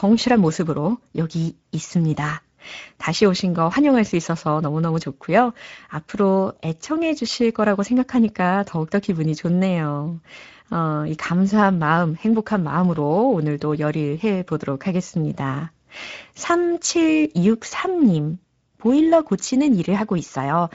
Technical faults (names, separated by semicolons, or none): Speex codec